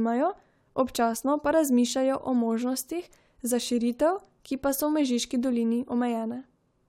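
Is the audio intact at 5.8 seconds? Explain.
Yes, at 5.8 seconds the speech is intact, with no audible dropout, click, distortion or other fault at that moment.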